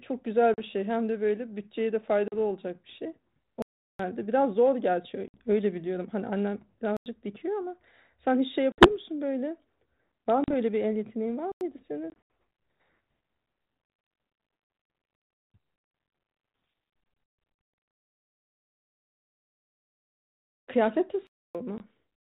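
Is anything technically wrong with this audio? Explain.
Yes. The audio is speech carried over a G.726 ADPCM link at 32 kbit/s. It has two kinds of fault.

Packet loss on an ADPCM call occurs at 0.54, 2.28, 5.28, 8.72, 10.44, 12.1, 17.26 and 21.78 s. Most holes last 20 to 60 ms. Around 12.1 s, about 120 ms goes missing in pieces across 200 ms, and the longest piece is 80 ms. The missing packets are filled with silence, so each hole has hard edges. The decoder's adaptive predictor and step size then no longer match the sender's. When the speech comes back it is slightly distorted. It settles within a few tens of milliseconds.

A block of digital silence occurs at four points. The first starts at 3.62 s and lasts 0.37 s. The second starts at 6.97 s and the third at 11.52 s, and each lasts 93 ms. The fourth starts at 21.27 s and lasts 0.28 s. In each block the sound is silent. The sound drops to nothing and returns with no fade. 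The short blocks sound like brief holes. The long ones sound like clear dropouts. The first three block lengths fit buffers of 16384 and 4096 samples, which points to an output buffer that was not filled in time.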